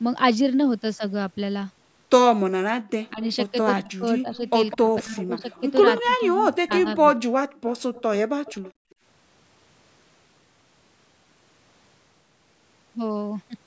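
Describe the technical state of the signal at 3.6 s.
At 3.6 s the speech is ducked by up to about 20 dB. This is speech suppressed in double talk, from 3.12 to 7.03 s, likely an echo canceller turning down its own talker along with the loudspeaker echo.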